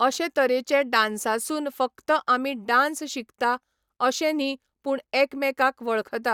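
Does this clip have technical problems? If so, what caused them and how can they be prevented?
No technical problems are audible.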